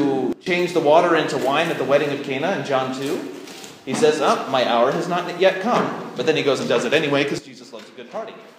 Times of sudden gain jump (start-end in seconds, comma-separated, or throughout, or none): 0.33-0.46, 7.38-8.59